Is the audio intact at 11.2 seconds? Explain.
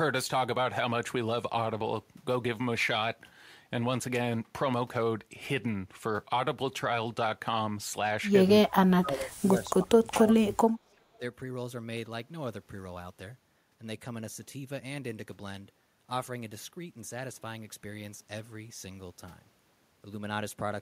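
No. From 11.18 to 11.22 s the speech briefly dips by roughly 10 dB, which is likely speech suppressed in double talk: an echo canceller mistaking overlapping talk for echo and turning it down. Unlike a packet-loss dropout, it dips rather than going silent.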